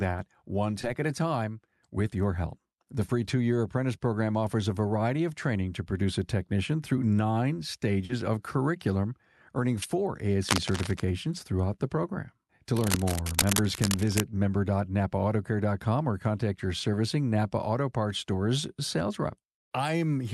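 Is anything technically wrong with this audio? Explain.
Yes, there are two kinds of problem in this speech clip, which came through a call path whose top end stops around 12 kHz.

Short concealed packet loss shows up twice. At 0.81 to 0.85 s, just before "at a time with", about 20 ms of audio never arrived in time. Again at 8.05 to 8.11 s, between "a technician through nine" and "of curriculum earning four", about 40 ms went missing. Each time the receiver patched the hole by stretching out the sound it last had and then blending back into real audio. You hear a quick smear or wobble.

Cable scratch noise hits from 10.48 to 11.01 s, ending right before "throughout the program", and again, for longer, from 12.76 to 14.23 s. These are dense, ragged bursts of scratchy rustle, sitting only about 5 dB below the speech. The likely cause is a worn cable, connector or control being moved, with its contact resistance jumping around and dumping crackle into the signal.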